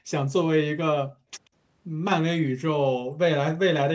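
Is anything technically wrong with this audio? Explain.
Yes. The speech shows two kinds of fault, both typical of a hands-free call path.

Background gated by the echo canceller occurs twice: at 0.00 to 0.07 s, with the room sound dropping by about 19 dB, and from 1.08 to 1.30 s, where it falls by about 32 dB for roughly a fifth of a second. While far-end audio was on the loudspeaker, the canceller clamped the microphone gain, so the ambience briefly vanishes and then snaps back when the suppression releases.

At 1.45 to 1.49 s there is a brief, very faint repeat of the speech, far below the main signal and trailing it by 137 ms. This is likely an echo leak: the loudspeaker output reached the microphone and the echo canceller failed to remove all of it, so a delayed scrap was sent back into the call. The absence of content above 8 kHz comes from the call's normal microphone processing and bandwidth.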